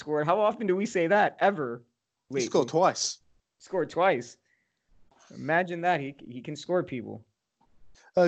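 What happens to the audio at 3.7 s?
Nothing goes wrong at 3.7 s: the speech carries on intact through that moment, with no dropout, click, distortion or other fault to be heard.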